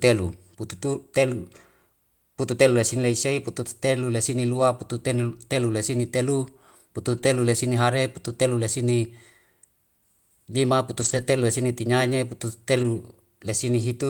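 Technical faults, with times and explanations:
4.53–4.59 s, 7.13–7.19 s, 8.29–8.31 s, 11.01–11.23 s and 12.79–12.85 s: lost packet rebuilt from error correction. Each lost stretch (40, 40, 20, 120 and 40 ms) is played from a low-bitrate copy carried in the following packet, so there is no gap, but the sound turns briefly rougher and noisier.
7.21–7.25 s: short concealed packet loss, just after the rebuilt stretch at 7.13 s. About 20 ms of audio never arrived in time. The receiver filled 11 ms by extending the preceding sound, then blended back into the real signal, giving a brief smear or wobble.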